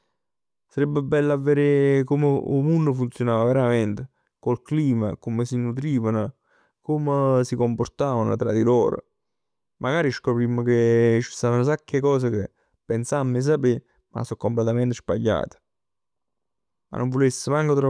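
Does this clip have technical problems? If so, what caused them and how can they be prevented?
No, nothing in this speech recording stood out as a technical problem on listening, so there is nothing here that calls for prevention.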